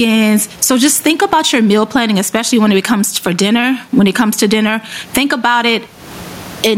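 Speech with gain pumping throughout: the room noise sits about 37 dB below the speech, and the gain swings by around 20 dB. Likely cause is input gain set far too high, with a fast limiter squashing the dynamics.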